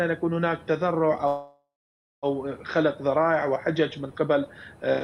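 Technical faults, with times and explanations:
1.27–2.26 s call audio freeze: packets likely stalled and emptied the jitter buffer, so the last sound fades into 0.57 s of silence, then resumes intact, 0.95 s late.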